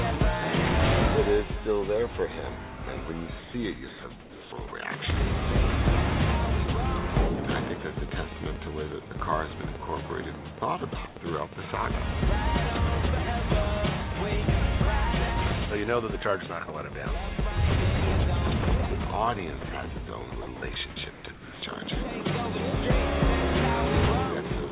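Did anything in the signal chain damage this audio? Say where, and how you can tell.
Yes, the call processing stage is where the damage happens, mostly at the sender's voice detector, plus a separate click problem.

Sound dropped by the voice detector: at 3.40–3.54 s, briefly at 10.6 s and 16.66 s, and at 21.32–21.62 s, the sound vanishes into steady synthetic hiss and resumes abruptly. This is likely the detector judging quiet material to be background and stopping transmission. Each time it is a single clean gap. A network loss would leave concealment artefacts or a repeated fragment instead.

Sound chopped by the voice detector: over 3.88–4.72 s and 20.3–20.76 s, the sound cuts in and out more than once. This is likely the detector toggling repeatedly near its threshold. What separates it from a single drop is the repeated switching within one stretch, which gives a stuttering texture rather than one hole.

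Train of clicks: from 5.04 s to the end, a regular ticking at 8.5 per second sits clearly above the sound, and it continues through pauses too. Similar pulses at a steady rate point likely to interference or a faulty connection or power supply. Because they carry on through the comfort-noise stretches, they are not tied to the detector switching.

Comfort noise in place of the background: at 11.08–11.16 s, and again at 21.1–21.62 s, the background becomes a flat, featureless noise. In the first stretch it is about 4 dB quieter than the real ambience. This is likely discontinuous transmission filling a pause with synthetic noise. Unlike the drops, no wanted sound is lost. Only the background's texture and level change, all within the clip's narrowband ceiling of 4 kHz.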